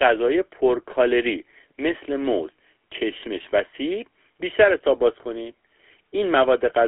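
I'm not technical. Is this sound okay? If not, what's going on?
No. The speech has passed through the GSM full-rate codec, the original mobile phone voice coding, for the whole clip. It rebuilds the voice from a simple model of the throat and mouth driven by a coarse pulse pattern, which gives the plainly audible buzzy, gravelly roughness. It also squeezes the sound into a telephone-width band, with nothing above about 3.7 kHz, so it sounds thin and muffled.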